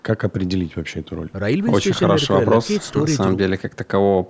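Nothing's wrong here: the speech has simply been through a call's microphone processing, so the lowest bass is trimmed and there's nothing above 8 kHz, which is just how that path works.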